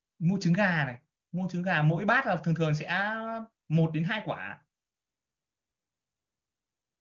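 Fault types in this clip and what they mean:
The speech comes through an AMR wideband (HD Voice) link at what sounds like its top rate, and no technical faults can be heard in the signal.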